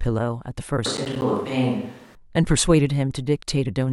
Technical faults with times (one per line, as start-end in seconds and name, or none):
0.86-2.15 switch to a distant microphone
0.97-1.22 processor overload crackle